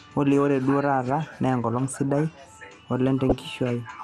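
From the start the speech is dull, with a granular, gurgling edge on every phrase. The top of the spectrum comes and goes and the remaining detail sounds coarse. This is MP2 compression, likely MPEG Layer II at a low rate, somewhere near 80 kbps. At that rate the encoder cannot feed all 32 sub-bands, so it shuts off the upper ones and quantises the rest coarsely. The damage is plainly audible.

From 3.29 to 3.38 s, a stretch of about 90 ms, there are short blips of noise in single sub-bands over the speech. This is DAB burbling. Bit errors have got past the error correction into the MP2 data, corrupting samples, so short blips of noise appear in single sub-bands. The length fits a handful of damaged frames, around five, and the damage points to a small error rate, on the order of a fifth of a percent.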